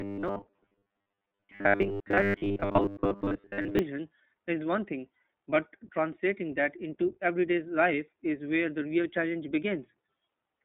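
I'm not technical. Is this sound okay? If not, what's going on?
No. From the start to 3.79 s there is robotic sound from repeated short buffers. New audio likely arrived too slowly, so the software kept replaying tiny snippets, about 10 ms each, in place of most of the real audio. The speech becomes a stiff, metallic buzz at about 100 Hz that only loosely follows the talking.

Throughout the clip, the speech was squeezed through the iLBC codec, a phone-call format that handles audio in 20 ms pieces and cuts everything above about 3.6 kHz. The voice sounds muffled like a phone line and plainly rough and somewhat synthetic.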